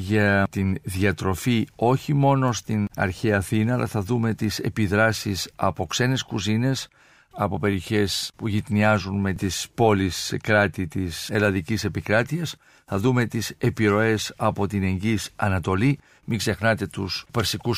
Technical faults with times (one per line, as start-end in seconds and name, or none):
0.58 dropped samples
7.73 dropped samples
11.45 dropped samples